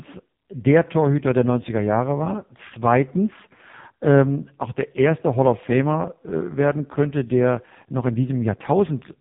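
From start to finish the speech has gone through the AMR narrowband mobile codec, and it's hit hard. The top end stops dead around 3.8 kHz, so everything sounds boxed-in and phone-like. The codec rebuilds the voice from a vocal-tract model fed by a handful of pulses per frame. At this level of damage that leaves a buzzy, synthetic edge on every syllable, which fits a low-rate mode, around 5.15 kbps.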